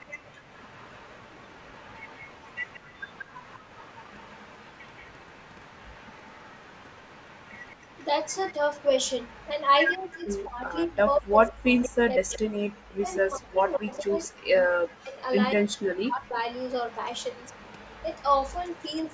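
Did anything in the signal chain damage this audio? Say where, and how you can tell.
Yes. Echo leak, 0.0 to 14.28 s and 16.54 to 19.13 s: a faint copy of the speech, around 30 dB down, trails by 179 ms, likely residual loudspeaker echo the call's echo canceller missed.

Background gated by the echo canceller, 0.32 to 0.44 s and 12.8 to 12.89 s: the room sound dips by about 20 dB, then about 37 dB, as the canceller clamps the microphone.

Speech suppressed in double talk, 9.96 to 16.38 s: for about four seconds the speech drops in pieces, as deep as around 40 dB, likely as the canceller turns down both sides during overlap.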